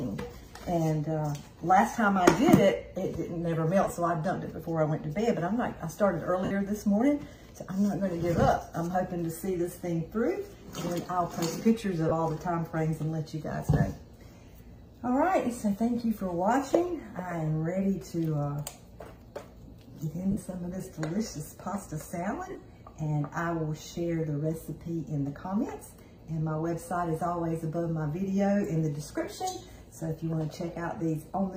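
The audio has brief dropouts from lost LE Audio frames at 3.84–3.90 s (short scattered gaps), 6.45–6.51 s, 12.09–12.11 s, 20.31–20.37 s and 22.50–22.55 s. The LC3 decoder fills each loss by repeating the previous spectrum with randomised phase, so the sound smears into noise for 22 to 60 ms.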